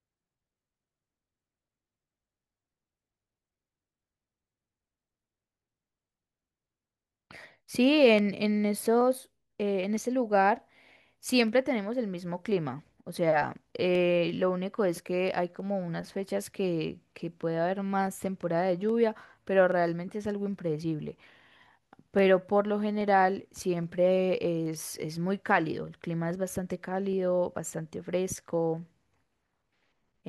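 From 0.77 s to 29.6 s, a click repeats every 0.82 s, about forty times in all. These are clock drift buffer slips. Two clocks likely disagree by around 200 ppm. The buffer drifts until a handful of samples is dropped or repeated.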